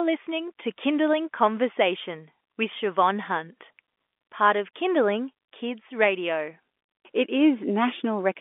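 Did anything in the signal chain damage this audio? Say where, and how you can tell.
No, nothing stood out as damage from any stage of the signal chain on listening.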